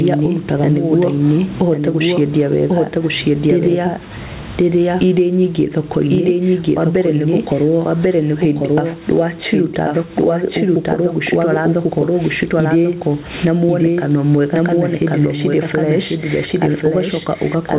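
A doubled audio track runs throughout: a second full-band copy trails about one second behind at roughly equal loudness, likely an out-of-step capture path mixed in twice. Gain pumping is also present throughout: the gain swings by roughly 10 dB, pulling loud and soft parts closer in level, likely excessive input gain clamped by a fast limiter. Both faults sit inside audio with nothing above 4 kHz, which fits a G.711 mu-law call path at 64 kbps.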